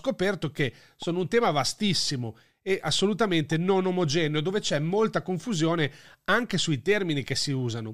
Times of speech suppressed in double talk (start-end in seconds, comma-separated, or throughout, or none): none